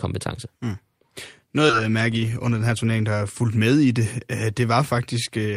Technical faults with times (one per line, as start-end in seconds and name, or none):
1.69-1.71 skip ahead
2.29-2.71 jitter buffer speed-up